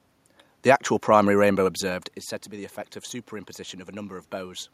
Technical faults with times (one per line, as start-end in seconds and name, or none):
none